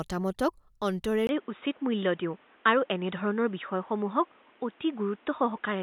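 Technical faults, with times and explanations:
1.27 s to the end: input switched to a poorer device, likely the cause. After a 20 ms silence the sound turns boxy, with nothing above 3.8 kHz, and a new noise floor appears about 35 dB below the signal at roughly unchanged level. A simple low-pass filter would add neither the gap nor the fresh background noise.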